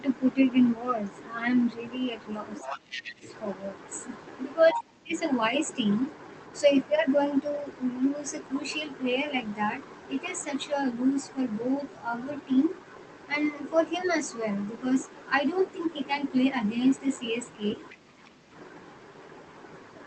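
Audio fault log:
2.57 to 18.29 s, other side's voice leaking through: the echo canceller likely left part of the loudspeaker signal in the microphone, so a second voice surfaces at 2.57–3.14 s, 4.69–4.80 s, 17.88–17.95 s and 18.25–18.29 s, about 10, 5, 25 and 35 dB below the speech.
2.61 to 18.53 s, speech suppressed in double talk: with both sides talking, the canceller likely could not separate echo from talker and turned everything down, so the speech dips by about 20, 15 and 10 dB at 2.61–3.24 s, 4.72–5.13 s and 17.80–18.53 s.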